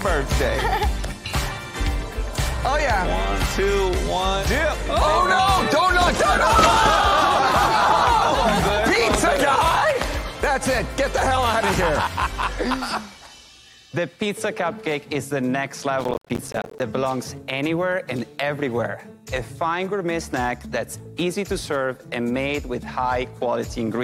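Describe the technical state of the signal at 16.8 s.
Processor overload crackle runs from 16.00 s and ends right at 16.8 s. The processor repeatedly missed its buffer deadlines, and each miss left a hard-edged silent gap. The gaps are short enough to fit buffers of around 10 ms, and dozens of them merge into a gritty tearing crackle over the sound.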